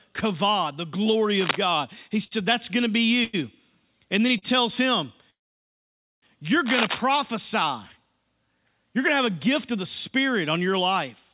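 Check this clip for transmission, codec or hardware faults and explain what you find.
Three kinds of fault can be heard: two bursts of cable scratch noise, three short stalls from late packets, and one call audio freeze. All of this is heard through a narrowband call path with nothing above 4 kHz, which fits G.711 mu-law at 64 kbps.

Cable scratch noise occurs from 1.39 to 1.57 s, right after "kavod the glory", and again from 6.64 to 7.01 s. This is likely a worn cable, connector or control being moved, so the contact resistance flickers and injects ragged, dense noise. The first burst sits about 5 dB below the speech. The second is roughly as loud as the speech itself, so it sounds like a harsh rustle laid over it.

Short stalls from late packets occur from 2.24 to 2.33 s, from 3.24 to 3.35 s, and from 4.38 to 4.44 s, the last just after "then he". Each time a packet missed its playout slot, the jitter buffer emptied, and the receiver stretched the last sound for 72 ms, 96 ms and 38 ms respectively before resuming from the same point. 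Nothing is lost, but the speech briefly hangs with a faint buzzy smear.

The call audio freeze runs from 5.30 to 6.24 s. The jitter buffer ran dry, likely because packets were held up in transit for about 0.92 s. The receiver briefly extended the last sound as a fading buzz, then fell to silence for 0.87 s. When the delayed packets arrived, speech resumed exactly where it stopped, so a gap has been inserted rather than anything removed.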